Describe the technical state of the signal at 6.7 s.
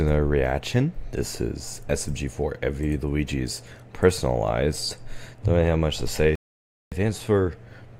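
At 6.7 s the signal sits inside a rebuffering stall running from 6.35 to 6.92 s. Playback ran out of downloaded audio, so sound drops to silence, then resumes exactly where it stopped, adding 565 ms. The waveform goes flat and the spectrogram shows a blank gap.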